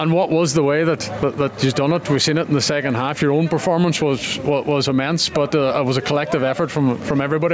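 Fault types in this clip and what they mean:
Gain pumping: The input gain was likely set far too high, so a fast limiter clamps it down on every loud sound. Throughout the clip the gain swings by roughly 10 dB, leaving the audio squashed.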